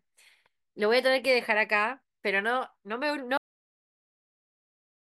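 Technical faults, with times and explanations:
3.37 s to end, cut-off end: the speech stops abruptly at 3.37 s, partway through a sound. There is no natural fade or room decay. The level falls straight to digital silence, which lasts for the remaining time to the end of the file, about 1.7 s. The final stretch of audio was never written out or played back. So the recording ends on a hard edge instead of letting the last sound finish.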